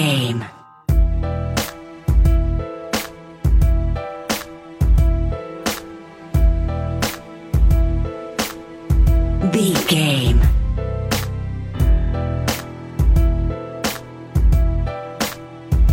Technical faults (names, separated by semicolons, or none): none